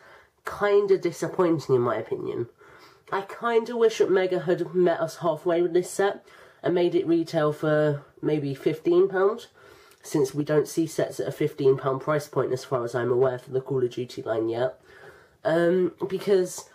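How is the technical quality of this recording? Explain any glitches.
No technical faults can be heard anywhere in the recording, and the signal stays continuous and stable throughout.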